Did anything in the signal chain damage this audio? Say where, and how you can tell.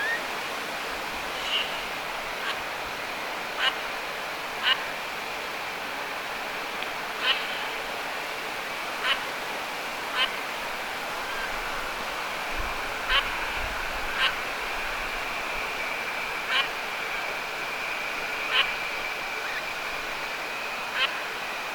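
Yes. A single loud pop sits at 12.01 to 12.03 s, a sharp thump standing roughly 10 dB above the surrounding level while the sound carries on beneath it. The likely source is an electrical pulse in the analogue wiring, such as a plug, switch or static discharge. Unlike a dropout, nothing is missing; something has been added.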